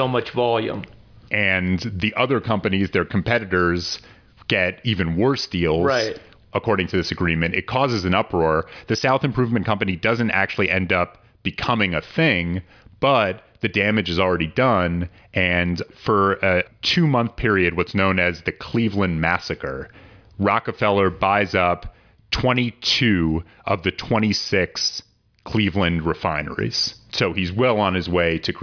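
No technical faults occur in this speech recording, so there is nothing to describe in time order.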